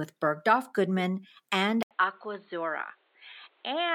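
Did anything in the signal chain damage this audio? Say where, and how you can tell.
Yes, at the input stage: after an 80 ms gap at 1.83 s, the speech turns boxy and quieter, and the spectrogram shows nothing above 4.3 kHz, likely an input switched to a poorer device.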